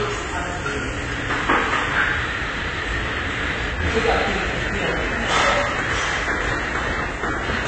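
From start to finish the audio is dull, with nothing above about 8.3 kHz, and carries a plainly audible warbling, smeared texture. This is likely AAC compression, with AAC-LC quantising the spectrum coarsely and lowering the cut-off, which fits a bitrate around 24 kbps.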